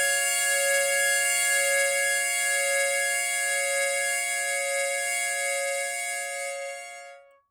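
No technical faults can be heard anywhere in this recording of sounds. Nothing in the audio points to a break, dropout or distortion at any point.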